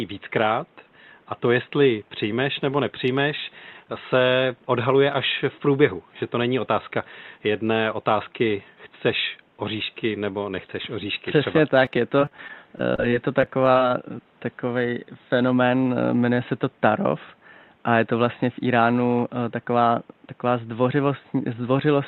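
From 11.85 to 13.75 s the speech breaks up with repeated packet loss, giving a robotic sound. Audio keeps going missing in short holes, none longer than 24 ms. Each hole is patched by stretching the last sound, and another follows soon after. About 191 ms is filled this way and 140 ms is simply lost. The result is choppy, with pieces missing, consistent with late or dropped packets on an Opus call path.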